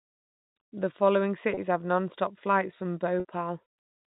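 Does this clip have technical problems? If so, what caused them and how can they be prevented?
Yes. At 1.54 to 1.57 s, just before "have nonstop flights from", and 3.20 to 3.25 s, just after it, the sound briefly holds with a buzzy sustain. This is packet loss with pitch repetition: the receiver repeats the last pitch period to cover gaps of 30 ms and 50 ms. Adding a jitter buffer with forward error correction or redundant packets over a more reliable network path would prevent it.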